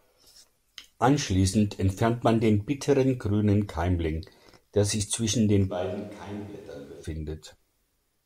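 From 5.72 to 7.02 s the speech turns roomy and hollow. Bass thins, the level drops roughly 10 dB, and background noise rises to about 30 dB below the speech. This is likely a switch to a distant microphone. It switches back abruptly.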